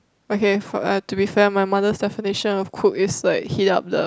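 Nothing in this short speech recording stood out as a technical problem on listening.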